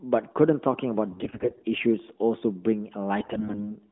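From 1.12 to 1.65 s, and again from 3.20 to 3.70 s, AMR bit errors roughen the speech. Flipped low-priority bits, about a tenth of them in the first burst and about a fifth in the second, misplace the excitation pulses and skew fine pitch, gain and spectral values. Pitch and level hold roughly steady, but the sound turns hoarse and gargly, worse in the second burst. A spectrogram shows smeared, noisy harmonics within the narrowband 200 Hz to 3.6 kHz band, and the waveform shows ragged, irregular cycles.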